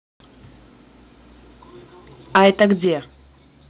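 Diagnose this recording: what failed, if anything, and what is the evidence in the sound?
From 2.35 to 2.65 s the loudest speech carries a harsh, crackling edge. This is microphone overload at the converter, likely from input gain set too high, driving peaks about 6 dB past full scale and flattening a few percent of samples. It appears only on peaks, unlike the steady coding noise of the 4 kHz-limited G.711 call path.

At 2.85 s, just after that distorted stretch, voice and background drop together by about 6 dB in a single step. This is the microphone volume stepped down in call processing. The software likely responded to the clipping by lowering device input gain. A compressor would ride level gradually, not jump once.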